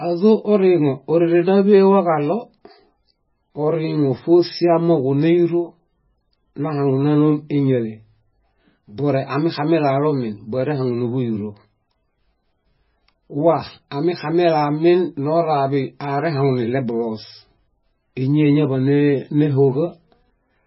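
From start to finish the speech is band-limited, with nothing above 5.6 kHz, and sounds watery and swirly with smeared attacks. That is likely heavy MP3 compression at a very low bitrate.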